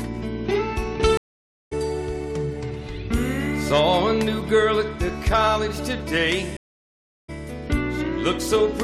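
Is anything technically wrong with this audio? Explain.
Yes. Two stream reconnects, at 1.17–1.73 s and 6.57–7.30 s. Each time the connection dropped and a fresh decoder restarted mid-stream. The sound cuts to silence for 540 ms and 717 ms, then resumes about 500 ms and 400 ms further on, skipping ahead.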